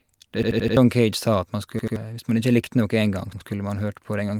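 Speech with a repeated buffer fault: new audio missed its deadline, so the last 85 ms block (consistent with a 4096-sample buffer) replayed with hard joins, stuttering four times at 0.43–0.77 s, twice at 1.79–1.96 s and once at 3.33–3.41 s, dropping roughly 300, 150 and 100 ms of speech.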